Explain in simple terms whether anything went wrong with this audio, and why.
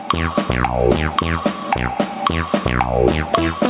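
Yes, there's gain pumping all the way through: loud and soft parts end up closer in level, so everything feels squashed. The likely cause is the input level set far too high, with a fast limiter pulling it back on every peak. The call path trims the top end at around 4 kHz.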